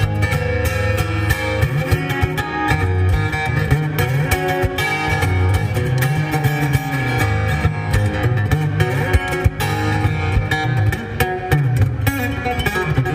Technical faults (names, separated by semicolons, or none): none